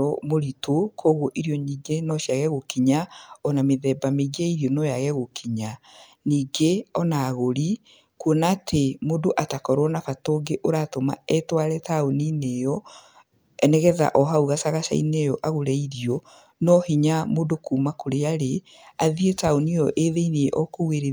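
No technical faults can be heard anywhere in it.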